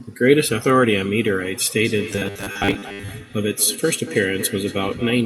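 From 1.85 s to the end, a feedback echo between two devices sets in. A second device in the room replays the far-end audio into the microphone, which its canceller cannot remove, so the speech returns about every 200 ms, thinner and ringing, peaking at about -14 dB relative to the speech.

Between 2.12 and 3.09 s, the speech turns into a rigid, metallic buzz near 100 Hz that still loosely tracks the speech. This robotic sound likely comes from repeated short buffers: about half the audio is replaced by repeats of roughly 10 ms segments.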